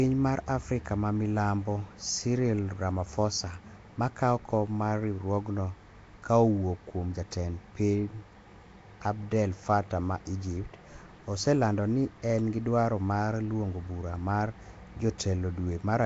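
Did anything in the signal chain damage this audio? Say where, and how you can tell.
Yes. Throughout, the speech carries a rough, hissy halo and a smeared, underwater quality, with nothing above 7.7 kHz. This points to the codec stage, likely Nellymoser compression. Its coarse fixed bit budget fills weak bands with noise, and the damage fits a rate near 32 kbps.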